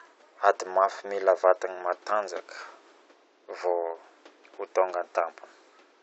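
No technical faults can be heard anywhere in the speech. Some background noise from the room sits beneath it, at about 32 dB below the speech level.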